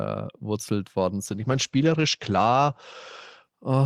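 From 1.26 s to the end, a call bitrate drop cuts the encoder from 48 to 12 kbps, holding the lowest rate for 1.34 s. Bandwidth narrows from 20 kHz to 8 kHz, so the speech turns muffled and coarsely watery, a codec degradation rather than abrupt dropouts from packet loss.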